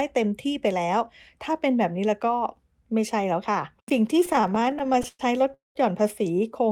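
From 4.25 to 5.52 s, packets kept arriving late, so the jitter buffer repeatedly ran dry: repeated stalls (stutter), 21 short gaps filled with continued sound, the longest 112 ms, making the speech drag and judder. At 5.54 s a call audio freeze follows, likely from packets held up in transit; the last sound stretches and fades into about 160 ms of silence, inserting a 213 ms pause before resuming.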